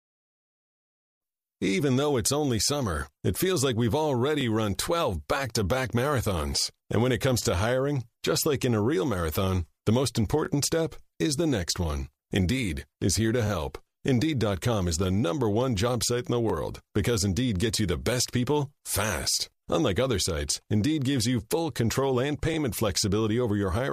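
Brief stutters occur at 4.41, 7.43, 10.45, 16.50, 19.52 and 22.54 s. These are overlapping chunks. The speech was handled in 3.0 s blocks, and each block began slightly early. About 21 ms of speech therefore plays twice at each join, causing a click-like stutter.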